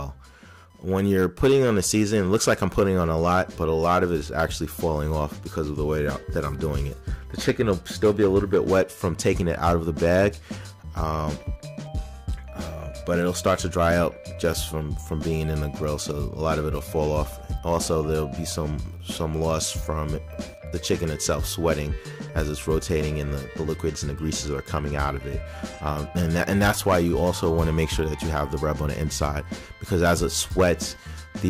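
Computer activity noise runs through the whole clip. A faint buzz sits roughly 40 dB below the sound, pulsing at around 1 kHz. Processor or graphics load shifts the shared ground of the audio circuit. The buzz tracks that activity, not the audio.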